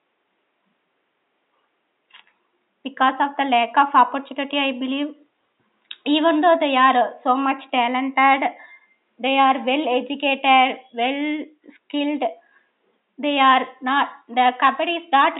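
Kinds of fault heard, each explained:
No faults heard.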